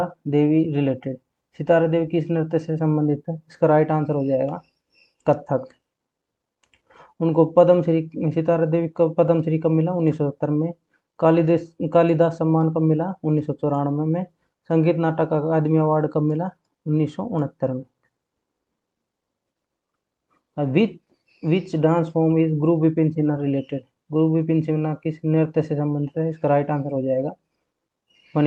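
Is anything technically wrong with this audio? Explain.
No, nothing is technically wrong: the signal shows no faults, and what can be heard of the call path is the ordinary character of an Opus-coded connection, with the top of the spectrum rolled off at around 12 kHz.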